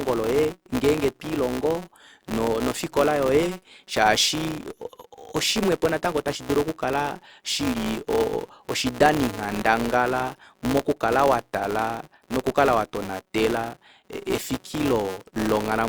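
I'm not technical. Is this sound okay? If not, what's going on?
No. A filter restarted on every block runs through the whole speech clip: the filter forgets itself at each short chunk, causing a buzz repeating 188 times a second.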